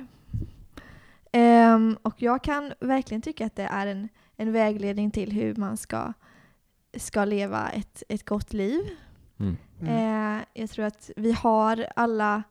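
No technical faults can be heard anywhere in this recording.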